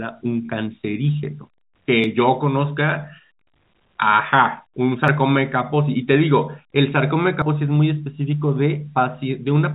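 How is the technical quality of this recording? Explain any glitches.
The speech is band-limited to 4 kHz, as expected over a G.711 A-law call path, and has three skips at 2.04, 5.08 and 7.42 s. Each is a jump forward in the speech, likely a dropped buffer (overrun) where unread samples were overwritten. The first two lose roughly 20 ms; the 7.42 s gap is longer, around 70 ms.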